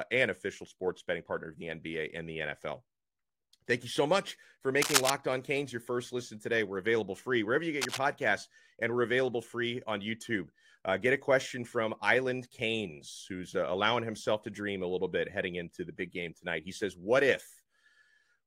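From 4.82 to 5.10 s, and again from 7.81 to 7.99 s, dense, uneven scratching rustles over the speech, the first burst louder than the voice and the second quieter. This is cable scratch noise, likely from a worn connector shifting. Unlike a single digital click, it forms an irregular crackling cluster.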